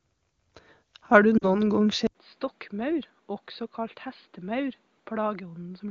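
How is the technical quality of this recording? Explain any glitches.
The recording has two audible faults, both starting in the first half, heard through AMR wideband (HD Voice) coding that itself leaves no clear damage.

Lost AMR speech frames, 1.38 to 1.57 s: about 40 ms of speech fails to arrive, consistent with two 20 ms frames. The decoder bridges the gap by repeating the last good pitch and vocal tract settings at falling gain, producing a brief smeared, fading dip before the speech recovers slightly rough.

Input switched to a poorer device, from 2.07 s to the end: an 80 ms silence, then the sound turns dull and boxy, with nothing above 4.8 kHz. The level drops by roughly 10 dB, and a faint new noise floor appears. A change of microphone or headset profile mid-recording is the likely cause.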